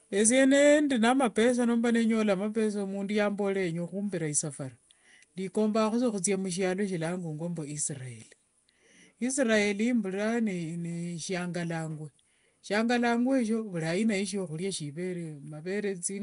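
Nellymoser compression runs throughout this speech clip, audible from start to finish as a rough, hissy halo and a smeared, underwater quality, with nothing above 10.6 kHz. The damage is plainly audible and most likely comes from the Flash-era Nellymoser Asao codec, at a rate consistent with about 44 kbps. Its fixed, thin bit budget per block leaves weaker bands unallocated and fills them with noise, producing that grainy wash over the speech.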